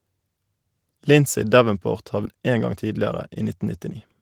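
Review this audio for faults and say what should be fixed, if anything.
Skip ahead at 2.25 to 2.27 s: about 0.7 s of speech vanishes and playback joins directly, with no silent gap, unlike a dropout.

Jitter buffer speed-up from 2.35 to 3.48 s: repeated pitch-period trimming runs speech 7% faster, removing about a tenth of a second; pitch stays unchanged, unlike resampling.

Sizing the jitter buffer for burst arrivals and shrinking it gradually during pauses would prevent both.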